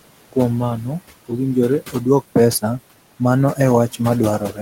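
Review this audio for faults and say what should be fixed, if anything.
Noise suppressor artifacts run through the whole recording. The suppressor pulls the room noise down by about 18 dB between phrases, frame by frame. Under the speech it lets that noise back up, so the background pumps in and out with the talker. The room noise sits about 15 dB below the speech. To prevent this, lower the suppression depth or smooth its gain changes over time.

Speech cut by the noise suppressor occurs from 4.39 to 4.59 s, near the end. A quiet stretch of speech there was treated as background noise. The suppressor turned it down along with the room sound, by up to about 10 dB. Roughly a tenth of a second is affected. The ending sounds swallowed and faint rather than trailing off naturally. To prevent this, give the suppressor a longer hold time so soft word endings are kept.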